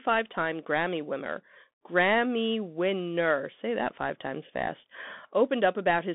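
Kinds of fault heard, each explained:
Bluetooth CVSD headset codec: one-bit adaptive delta coding squeezes the speech into a 200 Hz to 3.5 kHz band, with nothing above 3.8 kHz and plainly audible grainy distortion.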